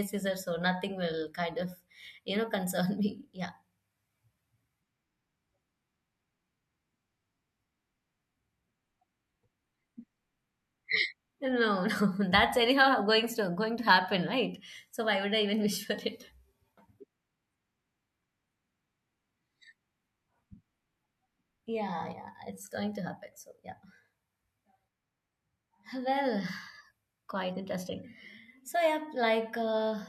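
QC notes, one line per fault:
No faults heard on this speech recording; nothing to log.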